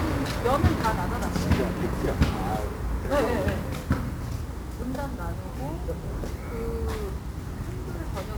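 An everyday-sound recording carries 1-bit DFPWM compression from start to finish. The damage is heavy. Each sample is reduced to a single up-or-down step, so the waveform is traced by a constantly adjusting slope rather than stored levels. That coarse tracking leaves loud broadband quantisation noise under everything. The whole clip sounds fuzzy and crackly. Fine high-frequency detail is buried in hiss. The density of the noise fits a rate near 48 kbps.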